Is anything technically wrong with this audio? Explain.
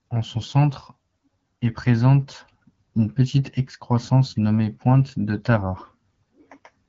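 No, nothing in this speech clip points to a technical fault. It carries the band-limited character of the AMR wideband (HD Voice) codec at 12.65 kbit/s, with only light coding damage.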